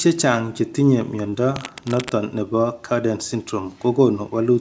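Short concealed packet loss at 1.30 to 1.34 s: about 20 ms of speech arrived too late, so the decoder extended the preceding sound, leaving a brief smear. Cable scratch noise from 1.56 to 2.10 s: rough, uneven rustling bursts sit about 10 dB below the speech, likely from a worn cable or connector being moved.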